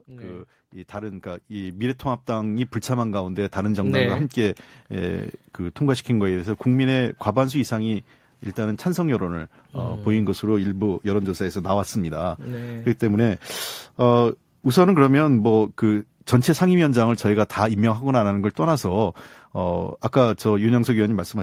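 From about 0.05 s to 5.25 s there's automatic gain rising: the AGC decided the input was too quiet and kept pushing its gain up, about 14 dB in all. You hear the speech and the room noise behind it swell together over those five seconds.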